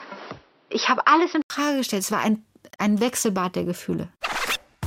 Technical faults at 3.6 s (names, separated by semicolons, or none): none